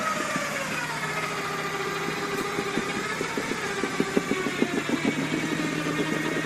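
At 2.3 s the call's bandwidth estimate falls and the encoder is pushed onto a much smaller bit budget, a call bitrate drop that sounds like a fall from around 48 kbps to about 18 kbps. With so few bits, the codec quantises the signal coarsely, and the audio turns rough and watery, losing its clean detail. The degraded quality holds for nearly two seconds before the bitrate recovers at 4.21 s.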